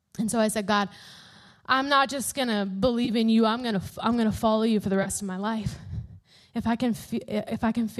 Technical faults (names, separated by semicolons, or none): AAC frame loss with concealment